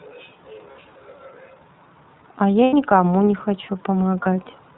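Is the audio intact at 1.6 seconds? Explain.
No, the iLBC codec colours the whole clip, 1.6 s included: 30 ms frames coded independently and nothing above 4 kHz leave this speech plainly rough and synthetic.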